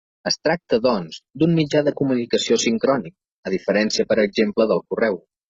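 From 0.89 s to the end, the speech switches abruptly, without a gap, to an adaptive stream at a lower bitrate, consistent with 96 kbit/s AAC dropping to 12 kbit/s HE-AAC. Treble turns hazy and synthetic, and a spectrogram shows crisp high bands becoming smeared, patchy texture.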